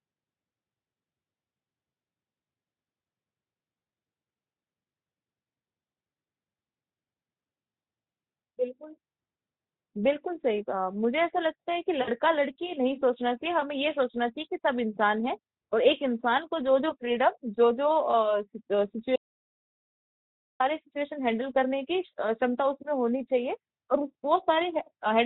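At 12.01 to 12.10 s there's VoIP packet loss concealed by the speech codec. About 60 ms of audio went missing, which fits three lost 20 ms frames. The Speex decoder bridges the gap by repeating its last pitch and filter at falling gain, so you hear a brief smear that fades instead of a clean gap. A shorter repeat at 18.11 to 18.15 s, which points to a single lost frame, gives a quick smeared blip.

Shortly after, from 19.16 to 20.60 s, the sound drops out to silence for about 1.4 s. It's dead digital silence with no room tone, cutting out mid-flow and snapping back. The likely cause is a lost input, such as a link failure or a momentary mute, while recording carried on writing silence.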